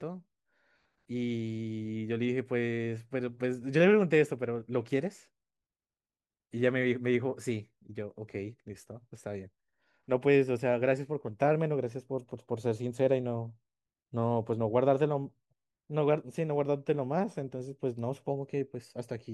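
No technical faults can be heard anywhere in the speech recording, and the signal stays steady and continuous throughout.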